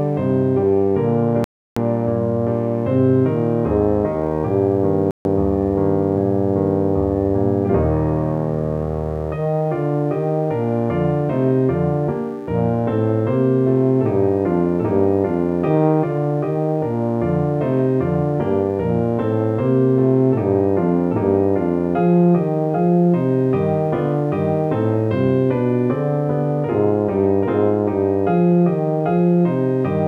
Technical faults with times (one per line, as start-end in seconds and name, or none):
0.00-30.08 mains buzz
1.44-1.76 Bluetooth stall
5.11-5.25 Bluetooth stall